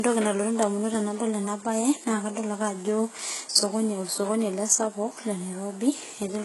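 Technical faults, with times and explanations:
Throughout, low-bitrate audio saved at a high bitrate: the artefacts of the first encoding remain, with nothing above 11.5 kHz. The likely cause is a very low-bitrate first encoding, which fits around 12 kbit/s, re-saved at a high bitrate that cannot restore what was removed.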